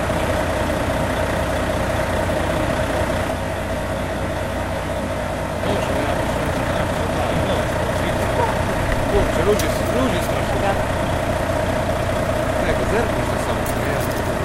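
Channel delay (comb filtering) from 3.31 to 5.63 s: one channel lags by around 20 ms before mono summing, cutting notches from around 30 Hz upward, so the sound turns rough and slightly doubled.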